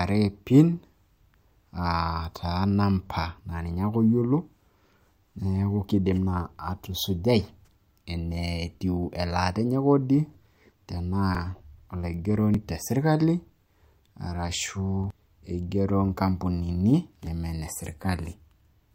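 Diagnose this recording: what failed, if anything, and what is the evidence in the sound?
Three points where the speech jumps forward with no gap: 11.35, 12.54 just before "te sirkali", and 15.10 s, each losing around a tenth of a second or a bit more. Likely a dropped buffer (overrun) at the driver stage, with samples overwritten before being read and the edges spliced together.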